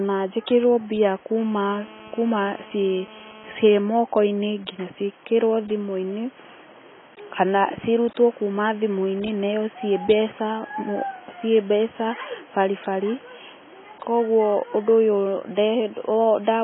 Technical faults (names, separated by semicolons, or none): AAC compression; GSM phone buzz